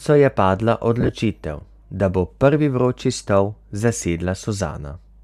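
From 1.01 to 1.09 s, lost LE Audio frames leave about 50 ms of speech missing, scattered over 80 ms in runs of roughly 20 ms at most. The decoder fills each gap by reusing the last spectrum with randomised phase, so the sound turns briefly into a noisy, smeared buzz. On a spectrogram the harmonics blur into short vertical noise patches.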